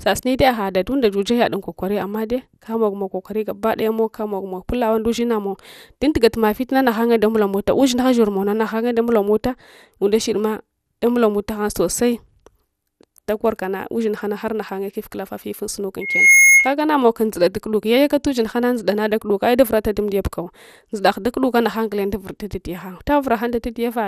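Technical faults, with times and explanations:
Throughout: MP2 compression. The speech sounds dull and gurgly, with a grainy, plainly audible distortion. This is likely MPEG Layer II coding at a low rate, which fits roughly 80 kbps. Starved of bits, the coder drops or coarsely quantises its 32 sub-bands. On a spectrogram, upper-frequency energy appears in blocky patches that flicker on and off between frames, with nothing above 19.7 kHz. The waveform looks ordinary, because the damage is spectral rather than in level.
16.01–16.74 s: loudspeaker feedback squeal. Just after "kufkulafa fifun sunka", a pure tone at 2.2 kHz swells over roughly 0.3 s until it is about 10 dB louder than the speech, then stops before "namow kam dzuda tukuduk". A microphone picked up its own loudspeaker, and at that frequency the loop gain rose above one. A spectrogram shows a single bright horizontal line that thickens as it grows. 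The waveform's envelope ramps up into a dense, steady block.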